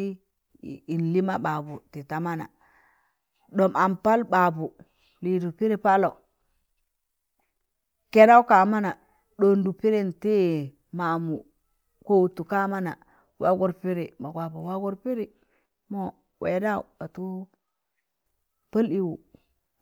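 No technical faults can be heard anywhere in this speech recording. There is nothing in the audio to flag or place on the timeline.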